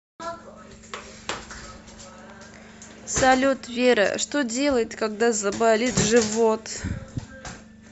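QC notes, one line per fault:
5.92–5.95 s, lost LE Audio frames: the speech briefly turns into a short noisy smear instead of clean sound. The decoder filled the gap by repeating the previous spectrum with scrambled phase, over roughly 30 ms, which fits three lost 10 ms frames of the likely LC3 stream.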